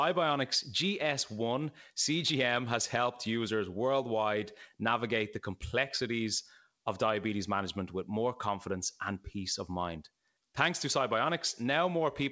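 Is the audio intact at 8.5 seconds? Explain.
Yes, the speech at 8.5 seconds is intact, carrying only the steady band limit of the call path, with nothing above 8 kHz, which fits G.722 wideband coding.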